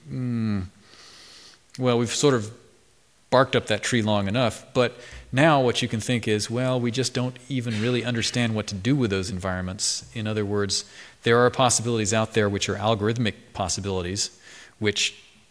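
No technical fault can be heard anywhere in the audio. Nothing in it points to a problem in the recording, processing or playback chain.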